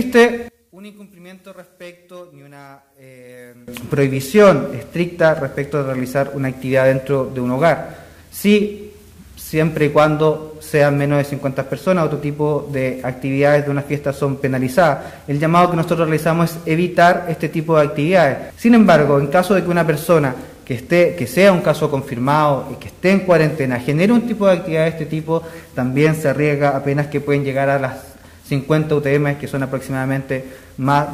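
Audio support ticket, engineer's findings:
One channel inverted, 0.48–3.68 s: mono sum drops about 24 dB, centre content cancels, faint residue remains. Likely one stereo leg polarity-reversed in wiring or processing.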